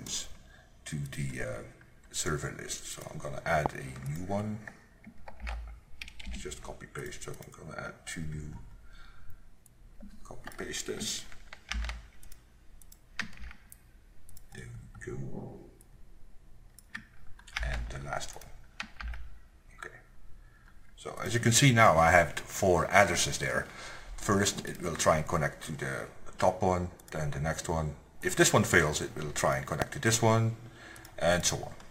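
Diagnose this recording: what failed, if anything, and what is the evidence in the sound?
Two loud pops, at 3.66–3.68 s and 29.82–29.84 s, peak roughly 20 and 25 dB above the sound, which continues beneath. The likely cause is a voltage step in analogue wiring from a plug, switch or static. Each appears as a lone waveform spike and a thin broadband spectrogram line.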